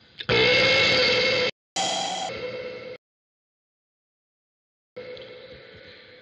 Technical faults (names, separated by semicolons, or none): playback stall; catch-up at higher speed; rebuffering stall